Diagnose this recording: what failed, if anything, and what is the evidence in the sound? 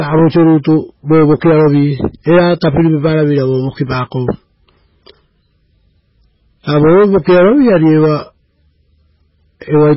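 The codec stage is the likely culprit: heavy MP3 compression at a very low bitrate, which fits about 16 kbps. Throughout the speech nothing survives above 5.5 kHz, and starved frequency lines flicker on and off between frames, giving a watery, swirly texture with smeared attacks.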